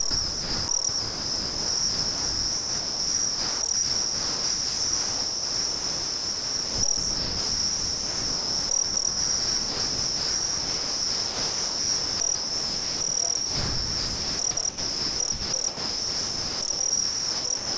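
From 0.11 to 13.01 s, the sound chops in and out. Most of the stretch, roughly 12 s, is replaced by a steady synthetic hiss. This is sound chopped by the voice detector, likely from the sender gating transmission and filling the gaps with comfort noise. After a short break, the same chopping returns from 13.37 to 17.78 s, with about 3.5 s filled. The call path's 8 kHz ceiling fits a G.722 codec.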